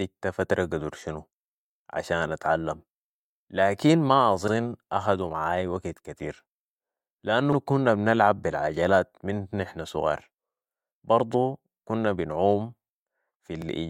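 Overlapping chunks cause stutters at 4.48–4.53 s, 7.53–7.57 s and 13.62–13.67 s. The speech was handled in 3.0 s chunks, and each one began before the previous ended, so about 48 ms of sound plays twice at these joins, heard as a brief click-like stutter.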